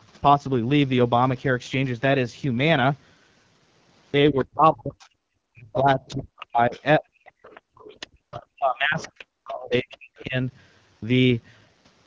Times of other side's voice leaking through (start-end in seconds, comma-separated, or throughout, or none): 4.39-10.23